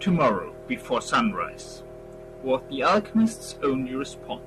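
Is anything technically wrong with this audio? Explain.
Yes. At 3.76 s the speech has a DC step: the waveform's zero line jumps suddenly by about -41 dBFS, as happens when a converter recalibrates or an offset input is switched into the path. The offset then decays away the way a 20 Hz high-pass filter would pull it back. The step is heard as a brief low thump or click under the speech, which carries on unchanged.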